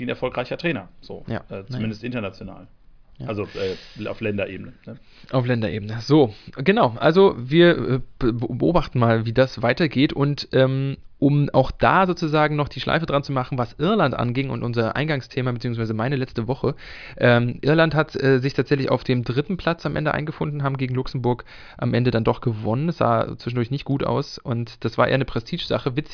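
No technical faults can be heard anywhere in the recording. Nothing in the speech points to a problem in how the audio was captured or carried.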